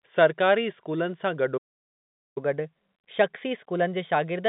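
At 1.57 s the speech cuts out and silence holds until 2.38 s, about 0.79 s. This is a playback stall. The player likely ran dry of buffered data or its thread was blocked. The speech then resumes.

From 2.38 s to the end comes catch-up at higher speed. The player drains its backlog by resampling at 1.1 times normal rate. Speech sounds hurried and lifts by about a semitone and a half, still within the narrow telephone band.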